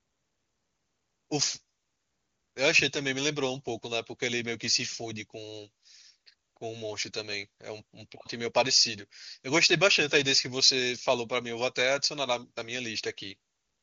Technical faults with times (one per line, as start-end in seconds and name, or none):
none